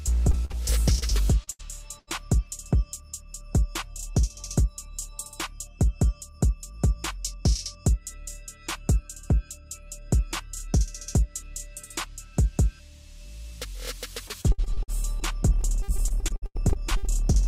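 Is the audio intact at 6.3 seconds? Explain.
Yes, at 6.3 seconds the audio is intact, with no dropout, click, distortion or other fault at that point.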